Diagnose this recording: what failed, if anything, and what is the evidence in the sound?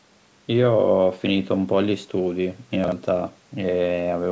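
Chunks out of order at the driver or buffer stage, between 2.84 and 2.92 s. Two chunks of about 40 ms swap places: the later one plays first, one slot early, giving a brief jumbled stutter with three hard joins. Unlike a dropout or packet loss, nothing goes silent or missing, and no fill or concealment is heard, just misplaced speech. The call microphone path caps the audio at 8 kHz.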